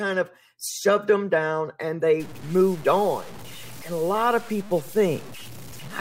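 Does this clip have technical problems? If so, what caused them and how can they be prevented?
Yes. From 2.2 s, right after "shoved them down and", to the end, the speech turns grainy, with quiet tails crackling. It sounds like low bit depth without dither, likely truncation to about 6 bits, leaving correlated error roughly 20 dB below the signal. To prevent it, keep a 16-bit or higher path and add dither whenever reducing word length.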